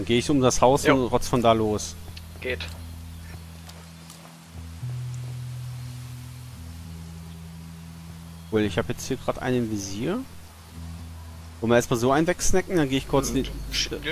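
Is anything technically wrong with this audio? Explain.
No, nothing technically wrong can be heard in this audio. There is nothing here that calls for a fix.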